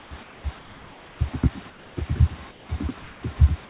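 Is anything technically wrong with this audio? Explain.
Yes. In the pauses at 0.00–0.11, 0.23–0.44, 0.59–1.19, 1.70–1.97, 2.51–2.69 and 3.02–3.23 s, comfort noise replaces the background: a steady, featureless hiss about 2 to 4 dB quieter. This is likely from discontinuous transmission, with the receiver synthesising noise while the sender is silent.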